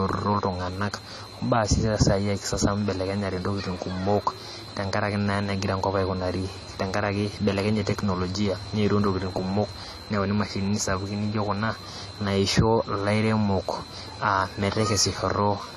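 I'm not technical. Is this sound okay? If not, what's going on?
No. Throughout the speech, the sound is dull and smeared, with a fizzy edge on hissing sounds. This is likely heavy AAC compression.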